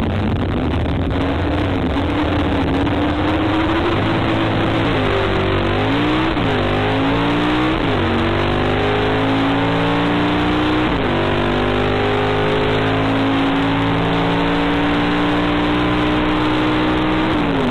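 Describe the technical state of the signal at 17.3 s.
At 17.3 s the signal is intact, with no technical fault to be heard at that moment.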